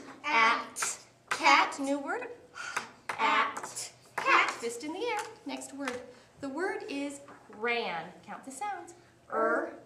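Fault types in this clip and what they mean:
Frames out of order: from 2.17 to 2.27 s two adjacent blocks of about 46.4 ms play in swapped order, fitting two frames per block, giving a garbled flutter; unlike a dropout or skip, nothing is missing and no time is lost.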